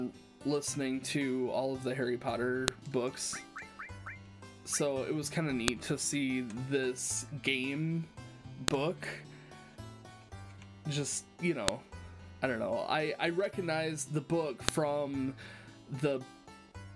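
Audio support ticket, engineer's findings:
Sharp, loud clicks at 2.68, 5.68, 8.68, 11.68 and 14.69 s. Regular 3 s spacing. File header played as audio. Concatenation or streaming stage passing each 3 s piece's WAV header into the stream. Header bytes decoded as samples. Snap at every piece boundary.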